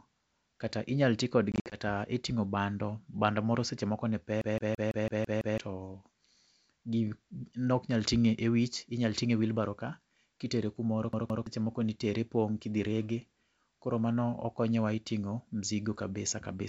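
From 1.52 to 1.79 s, right after "kata inyal tii", there's packet loss on an ADPCM call. About 120 ms of audio drops out in hard-edged silent gaps spread over roughly 200 ms, with the longest gap about 60 ms. That fits around seven lost packets. The decoder's predictor and step size lose track of the sender's, so each return is briefly a bit distorted until it settles before "e ting'o bando".

Then, at 4.41 to 5.58 s, just after "moro seche moko ne", you get a CD stuck on one turn. A 166 ms slice of audio loops seven times, with a tiny mute at each jump back, which gives that quick, even skipping-disc stutter. It happens again at 11.13 to 11.46 s, after "wheelbarow kaa kitere kumoro", with the same 166 ms loop repeating twice.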